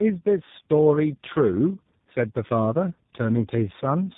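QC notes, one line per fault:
throughout: tandem speech coding. The speech sounds rough, muffled and warbly, with nothing above 3.8 kHz. It suggests about three speech codecs in a row, ending in something like G.729A, each re-encoding the previous coder's degraded output so the artefacts compound.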